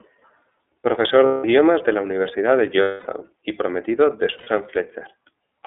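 Throughout the speech, the iLBC codec limits the audio to a telephone band of roughly 250 Hz to 3.5 kHz, so it sounds thin with no low body or high air. The coding damage is plainly audible as a slightly rough, synthetic edge. The character fits iLBC's 13.33 kbps mode with 30 ms frames, where each frame's excitation is coded on its own and much of the waveform detail is lost.

Lost iLBC frames cause three dropouts. From 1.26 to 1.45 s, just before "de la", a 180 ms gap is filled with a held, buzzy vowel-like tone. The decoder repeats the last pitch cycle mixed with noise. From 2.82 to 3.07 s, just before "y prometido de", the longest fill, 240 ms, fades as it goes on. From 4.38 to 4.50 s, right after "y prometido de", a brief 90 ms fill occurs. The voice is right again almost at once each time.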